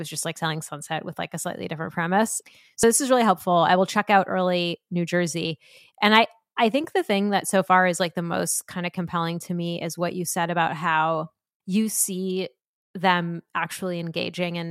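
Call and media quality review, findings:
Damaged data in compressed stream, 2.80–2.84 s: brief glitch in the speech, about 36 ms. Probable component: decoder input, file or network stream. Mechanism: corrupted bytes in the compressed frames, so the decoder misreads them, loses frame sync and scans for the next valid header before clean output resumes.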